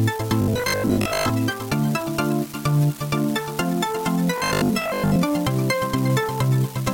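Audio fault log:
throughout: unreliable data bit. One data line flips its bit at random. Each error is an equal-sized spike, giving a steady crackle that continues in quiet gaps.
0.42–1.30 s and 4.38–5.18 s: robotic sound from repeated short buffers. A rigid, metallic 50 Hz buzz is imposed. Likely, 20 ms chunks repeat while most new audio is skipped.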